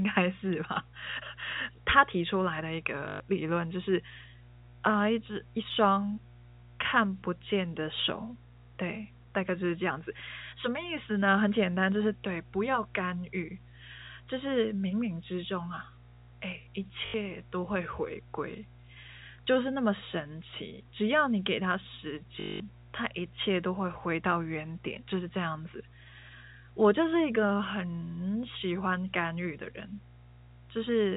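A steady mains hum runs through the whole recording. It sits at 60 Hz, about 25 dB below the speech, with a few low harmonics above it. A ground loop or a nearby transformer is letting the power line leak into the signal. It sounds like a constant low drone under everything. It stays audible through the narrow telephone band, which otherwise carries the speech cleanly.

Packet loss with the last packet repeated hits three times. The first runs from 3.08 to 3.20 s, lasting 120 ms. The second runs from 17.06 to 17.14 s, lasting 80 ms. The third runs from 22.40 to 22.60 s, lasting 200 ms. Each time the stream dropped out, and the receiver kept replaying its last packet. The repeats buzz at 50 Hz, which fits 20 ms packets. Each gap sounds like a brief robotic stutter, longest at 22.4 s.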